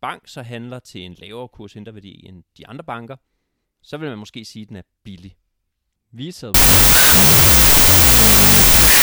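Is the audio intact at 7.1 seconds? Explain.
No. From 6.54 s to the end, there's a wrong sample width fault, which fits 32-bit float data being read as 16-bit integers. Each sample splits into mismatched halves, so the speech sits buried under loud, harsh noise, playing at half speed.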